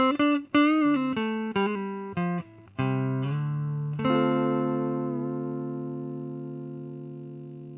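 No technical faults are audible anywhere in the recording.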